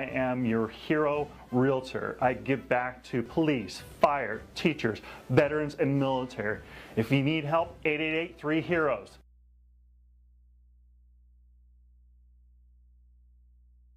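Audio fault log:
Throughout, mains hum: a steady low tone at 60 Hz sits under the audio, with some low harmonics above it, roughly 30 dB below the signal. Power-line current is leaking into the signal path through a ground loop or a nearby transformer.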